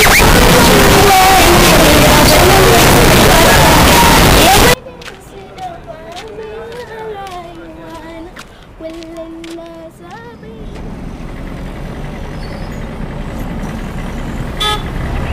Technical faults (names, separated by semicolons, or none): float read as integer